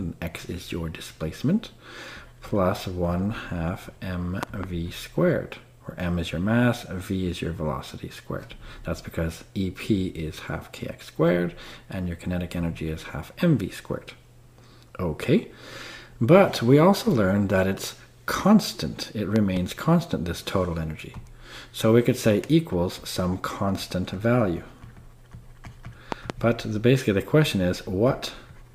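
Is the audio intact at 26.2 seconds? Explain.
No. A loud pop runs from 26.12 to 26.32 s and covers that moment. Two sharp pops land in quick succession, about 15 dB above the surrounding sound. The sound carries on underneath them. A pop like this is a sudden voltage step or pulse added to the signal. It likely came from a plug, a switch, static or a driver glitch. The circuits that follow shape each pulse into a brief thump.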